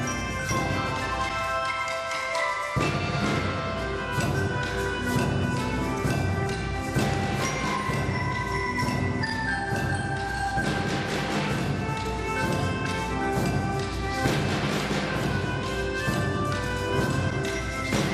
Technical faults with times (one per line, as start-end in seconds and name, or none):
0.00-18.14 MP2 compression
6.39-6.51 DAB burbling